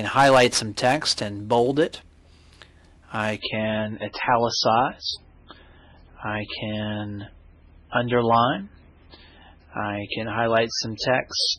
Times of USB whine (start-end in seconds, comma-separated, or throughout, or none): none